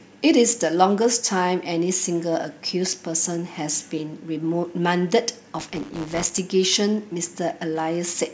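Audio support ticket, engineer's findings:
Buffer tearing, 5.58–6.39 s. Robotic 100 Hz buzz over speech. Playback ring-buffer writer and reader slipped; a small slice of each period replays audio from roughly 20 ms earlier. Waveform: hard steps every 10 ms. Spectrogram: regular vertical striping.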